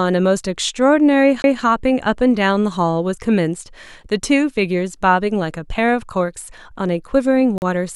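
A speech clip with two brief interruptions. At 1.42 to 1.44 s there is a CD skip: a knock or a flaw on the disc throws the laser onto another turn of the spiral, so the player mutes for roughly 20 ms and resumes from a different point. The short gap and the displaced continuation set it apart from a plain dropout, which simply goes silent and resumes on time, with nothing repeated or jumped. At 7.58 to 7.62 s the sound cuts to 40 ms of clean silence and then carries on. This is likely a Bluetooth stall, where interference delays packets, the headphones' buffer runs empty, and playback waits for the resent data. There is a short hole in the sound before it picks up again.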